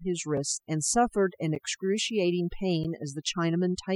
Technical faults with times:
0.00-3.95 overdone noise removal
0.37 block of digital silence
1.55 block of digital silence
2.84 block of digital silence

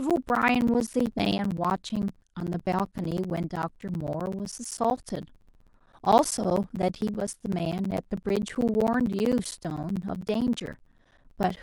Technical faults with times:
0.10-11.57 periodic USB or driver dropouts

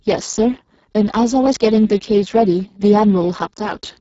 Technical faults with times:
0.00-4.01 Speex codec

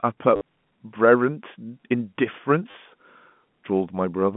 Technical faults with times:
0.36-0.41 packet loss with last packet repeated
2.71-2.74 packet loss with last packet repeated

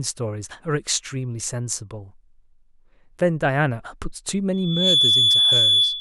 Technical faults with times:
4.53-6.00 loudspeaker feedback squeal

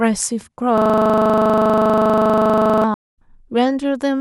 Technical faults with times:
0.78-2.84 system hang loop
2.94-3.17 stream reconnect

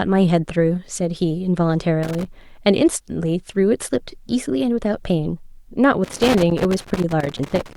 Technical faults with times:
2.03-2.25 loose connector crackle
6.04-7.76 loose connector crackle

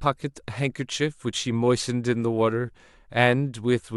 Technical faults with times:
none

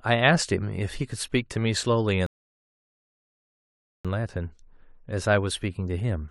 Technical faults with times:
2.26-4.05 rebuffering stall

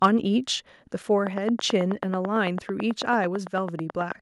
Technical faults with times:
0.04 microphone overload
1.27-4.13 train of clicks

